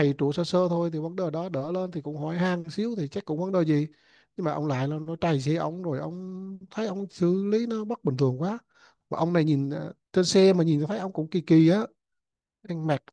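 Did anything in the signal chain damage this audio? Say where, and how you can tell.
No, nothing in the signal chain has left an audible mark on this speech recording. No stage, from capture through to playback, can be heard altering the sound at any point.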